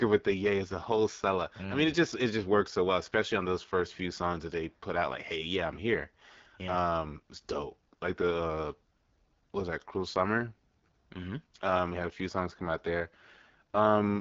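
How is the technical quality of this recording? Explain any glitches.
The recording is held back by plainly audible codec damage running through the whole clip, the signature of the AMR wideband (HD Voice) codec at one of its lowest rates, probably around 8.85 kbit/s. The codec rebuilds speech from a pulse-excited vocal tract model up to 6.4 kHz and pads the band above that with shaped noise, and nothing survives past about 7.6 kHz. At this rate the model is starved of bits, so the speech comes through plainly rough and raspy, with a dull, band-limited top.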